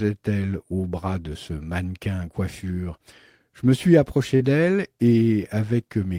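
A short concealed packet loss hits this speech recording at 4.35 to 4.42 s, just after "me suis": about 40 ms of the stream failed to reach the decoder in time, so the receiver improvised roughly 45 ms of replacement by extending the preceding sound, then cross-faded back into the real signal. The result is a brief smeared, wobbly patch where the audio briefly holds.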